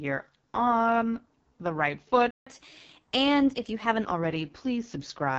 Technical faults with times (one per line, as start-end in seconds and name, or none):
0.00-5.39 AMR wideband (HD Voice) codec
2.31-2.46 playback stall
2.46-4.05 catch-up at higher speed